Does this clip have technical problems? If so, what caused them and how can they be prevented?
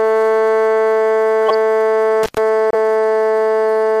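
Yes. Between 1.43 and 1.54 s, a corrupt frame was decoded: flipped bits in around five compressed frames were played anyway, so misplaced energy produces a loud, harsh burst over the music. Error-checked transmission with retransmission or concealment of bad frames prevents this.

From 2.23 to 2.38 s, an intermittent contact let a loose connector open for about 110 ms, cutting the sound out with crackles at both edges. Secure, well-seated cables and clean connectors prevent it.

At 2.71 to 2.75 s, a corrupt frame was muted: the decoder rejected damaged data and the player inserted silence, leaving an abrupt 44 ms hole, which fits three frames. Better error protection on the link, or packet-loss concealment instead of muting, prevents it.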